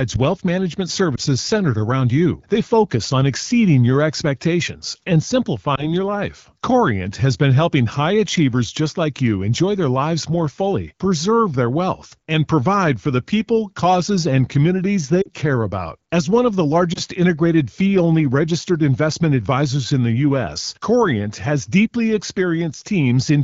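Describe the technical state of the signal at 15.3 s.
Just after "people causes and communities", lost AMR speech frames run from 15.21 to 15.29 s. About 40 ms is concealed with wideband sound fading toward near silence before recovering.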